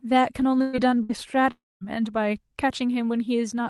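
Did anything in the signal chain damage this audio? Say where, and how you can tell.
Yes, the damage is at the network stage of a call. Two short bursts of packet loss: at 0.61 to 0.76 s about 120 ms of sound is missing, and at 1.03 to 1.12 s about 60 ms. In both the receiver's concealment stretches the last sound into a smeared, decaying buzz or hiss, then the speech jumps ahead with the middle gone. That's classic jitter-buffer concealment covering packets that never arrived.

The bigger hole, from 1.51 to 1.84 s, sounds like a long network dropout, most likely the link stalling outright. Roughly 300 ms of speech is lost. The concealment carries the last sound only briefly before it fades out, leaving about 220 ms of dead silence before the audio snaps back further along. The concealment giving up and going quiet is what tells you this was a sustained outage rather than a few scattered packets.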